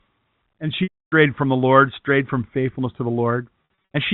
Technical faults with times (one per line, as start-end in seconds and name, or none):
0.83-1.12 packet loss with pitch repetition
3.64-3.69 packet loss with pitch repetition